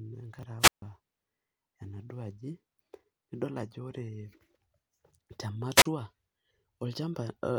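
At 0.39 s a 10 ms chunk of the speech arrived three chunks late and was played after the audio that should follow it, so chunks are out of order until 0.43 s. Nothing is missing, but the brief jumble has three hard joins.

From 0.59 s to 0.82 s the analogue radio link of the wireless microphone faded enough for the receiver's squelch to shut the output. Hiss rises, the sound drops to near silence for about 146 ms, then the voice returns. The same squelch dropout recurs from 5.75 s to 5.85 s, with a shorter hole of about 35 ms.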